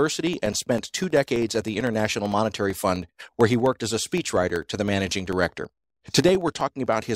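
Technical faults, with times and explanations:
0.08–7.06 s, periodic USB or driver dropouts: something stalls the audio path every 64 ms, blanking about a millisecond of speech with silence each time. That produces around a hundred evenly spaced ticks, heard only under signal. Their strict regularity distinguishes them from random clicks or codec glitches.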